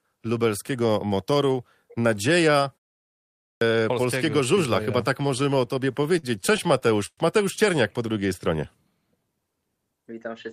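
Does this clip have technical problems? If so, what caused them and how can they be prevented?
Yes, three faults.

Clipped start after a pause: after a silence of about 0.77 s, the output device had gone idle and was still waking when sound resumed. The first 144 ms, from 3.47 to 3.61 s, were swallowed, so the sound begins abruptly without its onset. Keeping the output stream open through pauses, or feeding it low-level dither so the device never sleeps, would prevent this.

Repeated stalls (stutter): between 5.27 and 7.19 s, packets kept arriving late and the jitter buffer drained 17 times. Each time the receiver stretched the last sound to bridge the wait. That came to 301 ms of filled audio, about 16% of the span, with the longest gap 115 ms. Nothing is lost, but the sound drags and stutters. A larger or better-tuned adaptive jitter buffer, plus a steadier network path or traffic prioritisation, would prevent this.

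Jitter buffer slow-down: from 8.13 to 8.57 s, the buffer was running low and the receiver rebuilt its reserve by repeating pitch periods. This added 43 ms, so the sound plays at 93% speed with unchanged pitch and slightly drawn-out sounds. More initial buffering and smoother delay adaptation would avoid the need for this catch-up stretching.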